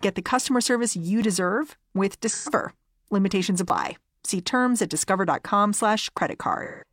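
Speech, with two kinds of fault. Audio missing between chunks at 1.22, 3.70 and 6.18 s: tiny skips, about 20 ms each, spaced 2.5 s apart, likely from chunked processing dropping audio at each boundary. AAC frame loss with concealment from 2.29 to 2.49 s (128 ms) and 6.64 to 6.84 s (171 ms): the decoder rebuilds missing frames from earlier spectrum, leaving smeared, phasey patches.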